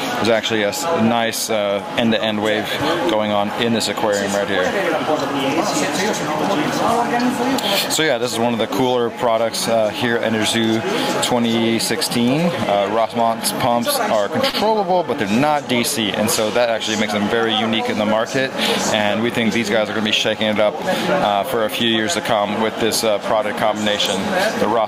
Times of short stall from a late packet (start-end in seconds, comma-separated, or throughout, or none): 14.49-14.55